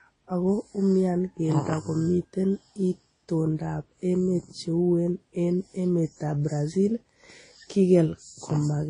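A speech recording carrying artefacts of transcoding between lossy codecs from start to finish, likely a low-rate MP3 pass near 32 kbit/s followed by Vorbis near 26 kbit/s. The artefacts of both codecs are heard together, and a spectrogram shows energy stopping abruptly at 9.9 kHz across the clip.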